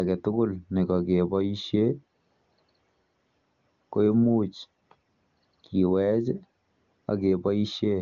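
No technical faults are audible.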